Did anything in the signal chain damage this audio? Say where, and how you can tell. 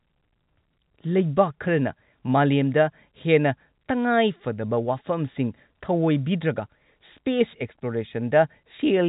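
No, nothing in the chain has damaged this speech: the telephone band-limit, with nothing above about 3.8 kHz, is simply the G.711 telephone coding doing its job, and any trace of its quantisation is faint at most.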